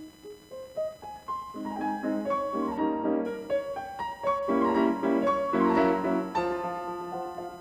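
A thin buzzing chirp, pulsing around a thousand times a second and sitting roughly 25 dB below the music, runs throughout: computer activity noise leaking through a shared ground.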